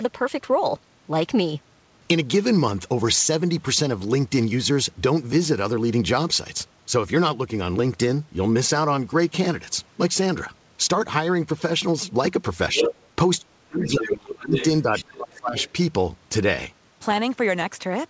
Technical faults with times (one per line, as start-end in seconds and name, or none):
12.73-12.93 speech suppressed in double talk
12.75-13.06 other side's voice leaking through
13.41-14.55 speech suppressed in double talk
13.80-14.15 other side's voice leaking through
14.41-14.66 other side's voice leaking through
14.84-15.56 speech suppressed in double talk
14.95-15.04 other side's voice leaking through
15.58-15.71 other side's voice leaking through